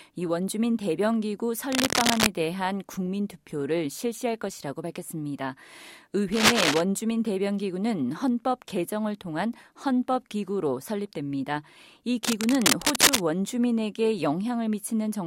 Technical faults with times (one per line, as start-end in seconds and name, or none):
1.72-2.28 cable scratch noise
6.32-6.81 cable scratch noise
12.24-13.23 cable scratch noise